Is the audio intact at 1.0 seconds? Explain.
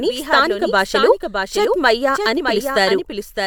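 No, a doubled audio track runs throughout: a flat, full-band copy trails about 0.7 s behind, a few dB quieter, likely from a second, slower capture path.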